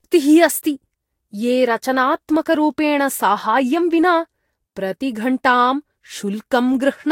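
Throughout, swirly, hollow speech with blurred attacks suggests generation loss, likely about three Vorbis re-encodes near 61 kbit/s. A spectrogram shows nothing above 16.6 kHz.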